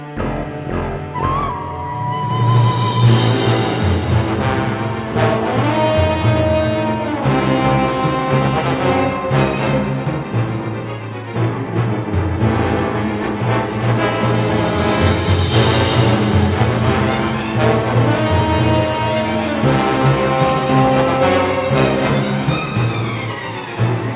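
The audio carries the narrowband sound of a telephone-grade call path, with nothing above about 4 kHz, consistent with a 64 kbps G.711 A-law link, and no faults are present anywhere in the clip.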